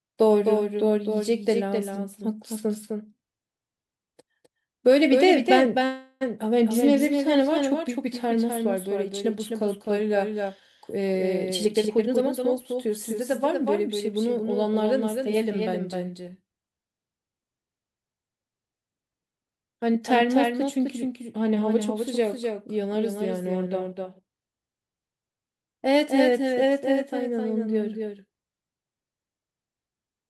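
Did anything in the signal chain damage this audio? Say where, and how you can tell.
Yes. A doubled audio track runs throughout, likely from a second, slower capture path; a full-band copy trails about 300 ms behind, roughly 5 dB quieter, without reverb.

A call audio freeze at 5.85 to 6.23 s, likely from delayed network packets emptying the jitter buffer: a 355 ms fading fill, then speech resumes with nothing lost.

Jitter buffer speed-up from 11.46 to 14.38 s: the receiver trimmed pitch-period slices, removing about 0.4 s, so speech runs at 112% speed with unchanged pitch and sounds hurried.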